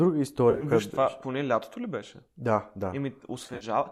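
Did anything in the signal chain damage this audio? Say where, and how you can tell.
Yes. AAC frame loss with concealment at 0.51 to 0.64 s and 3.47 to 3.64 s: brief smeared, phasey patches where the decoder refilled missing frames from the last good spectrum. Losses of 70 and 80 ms, in runs of a few tens of milliseconds, point to network drops ahead of a likely low-delay AAC decoder.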